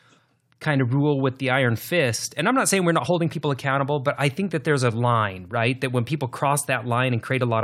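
At 3.05 s, right after "not saying we're not" and just before "people accountable but I", a brief glitch cuts into the speech. This is damaged data in the compressed stream: a short run of bytes in the encoded file was corrupted, so the decoder could not read that frame properly, lost its place in the stream and had to find the next valid frame header before normal playback resumed.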